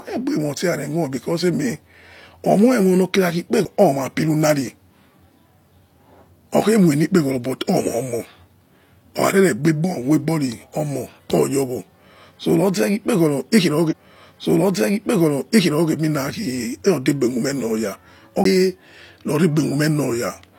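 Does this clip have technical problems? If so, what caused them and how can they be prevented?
Yes. A CD skip occurs at 3.65 s and again at 18.44 s. Each is a tick with a very brief mute as the laser jumps to another turn of the spiral. Unlike a segment repeat, it lands in a different place rather than replaying. Cleaning the disc and isolating the player from knocks prevents it.

A stream segment repeated runs from 13.87 to 15.88 s. The player fetched or queued the same chunk twice, so about 2.0 s of speech plays again after a small blip. That replay is far longer than a disc-turn jump. Deduplicating segments by sequence number in the player's buffer prevents it.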